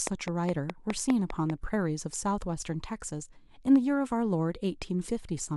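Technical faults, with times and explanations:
0.07 to 1.51 s, train of clicks: about seven evenly spaced sharp ticks, nearly five per second, standing well above the speech, likely from interference or a faulty connection.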